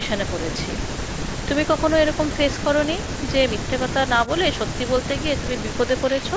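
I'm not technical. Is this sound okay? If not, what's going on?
Yes, this sound is okay.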